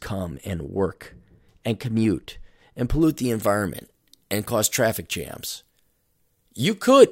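From 3.02 s, right after "work and commute and", to the end of the clip, pre-emphasis is left on. The treble boost of a 75 µs FM emphasis curve was never reversed, leaving 10 kHz about 13 dB hotter relative to 1 kHz. The speech turns thin, bright and sibilant.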